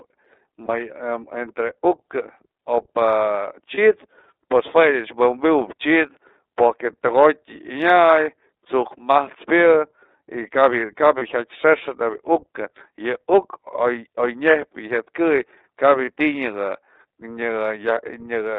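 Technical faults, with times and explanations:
throughout: iLBC codec. The speech sits in a telephone band of 300 Hz to 3.7 kHz and sounds clearly rough and slightly synthetic, consistent with iLBC working in 30 ms frames at about 13.3 kbps. A spectrogram shows nothing above 3.7 kHz and a hard floor near 300 Hz.
0.65 s, 3.74 s, 11.18 s, 16.04 s: lost iLBC frames. Each brief gap, about 30 ms and consistent with a single missing frame, is filled by a repeated pitch cycle blended with noise, so it sounds like a short buzzy held vowel. Because each frame decodes independently, the speech recovers at once. A waveform shows a small run of near-repeating periods, and a spectrogram shows flat, smeared harmonics.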